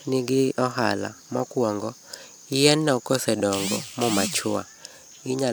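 Nothing in this speech recording stands out as a technical fault, so there's nothing to flag here.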